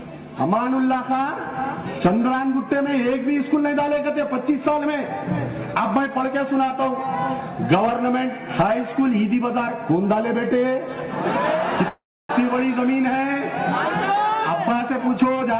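From 11.88 to 12.31 s there is a call audio freeze, likely because packets were held up and the jitter buffer ran dry. The receiver stretched the last sound into a fading buzz or hiss, then 300 ms of silence. The audio resumes where it stopped, with nothing lost but now 412 ms later.

From 14.89 to 15.58 s comes a jitter buffer speed-up. With surplus audio queued, the receiver repeatedly cut out short pitch-period pieces, roughly a fifth of a second in all. The sound plays at 126% speed at the same pitch and feels hurried.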